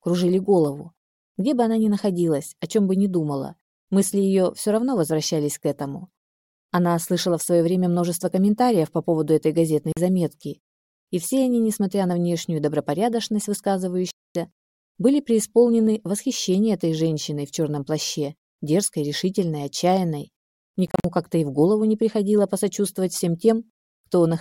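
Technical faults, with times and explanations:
9.92–9.97 s, 14.11–14.35 s and 20.87–21.05 s: Bluetooth dropout. The sound cuts out to silence, then comes back further along, as if it had kept playing through the gap. The first hole loses 44 ms. The second is much longer, at 247 ms. The third is a cluster of short holes spread over 174 ms, with 116 ms lost in all and no single gap longer than 44 ms. The likely cause is audio packets arriving at the headphones too late and being dropped.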